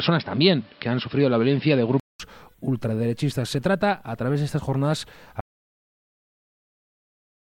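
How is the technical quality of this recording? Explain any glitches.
The recording has two clear technical faults: a change of input device near the start and a dropout to silence that runs to the end.

Input switched to a poorer device, from 0 to 2.20 s. The sound likely comes through a lower-grade input, such as a second microphone or a headset's call profile, before the capture moves to the better source. In that opening stretch nothing reaches above 5.4 kHz, so the audio is dull and boxy, with a background noise floor roughly 30 dB under the signal. At the changeover there is a 200 ms silence, and the level shifts by around 5 dB as the fuller sound takes over.

Audio dropout to silence, from 5.41 s to the end. The input is cut off abruptly while the recording continues, most likely because a device disconnected, a link failed or a mute was engaged, leaving the recorder writing silence. 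The final stretch is silence with no room tone at all, and whatever sound would have followed that point is lost.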